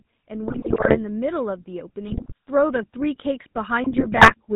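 GSM full-rate codec damage runs through the whole of this speech recording. The voice has the gravelly, buzzy roughness of that early mobile coder, which fits a 13 kbps stream, and nothing survives above 4 kHz. It models the vocal tract with a filter and drives it with a coarse, regularly spaced pulse excitation that keeps only every third sample, so the fine structure of the voice is lost and replaced by a mechanical grain.

Automatic gain rising begins at 0.27 s and continues to 4.5 s. The level swells slowly by about 9 dB as the gain control, judging the input too quiet, keeps turning itself up. Voice and background noise lift together rather than the voice alone, which is how a gain stage acting on the whole signal sounds, as opposed to someone speaking louder.

GSM bit errors break through from 0.48 to 0.98 s, from 2.08 to 2.32 s, and from 3.84 to 4.34 s. In each burst the speech turns into squawks, pops and gargling, which points to a run of corrupted frames from a weak radio link. 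Flipped bits in the filter, pitch and gain parameters bend the spectrum or make the level jump for a frame at a time.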